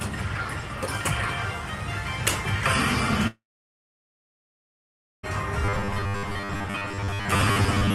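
At 3.27 s there's a long network dropout, likely from audio not arriving. The last sound trails off briefly, then about 1.83 s of silence until 5.26 s, and that missing stretch never returns.

From 5.65 to 7.94 s comes robotic sound from repeated short buffers, likely 10 ms chunks being looped, laying a rigid 100 Hz metallic buzz over most of the audio.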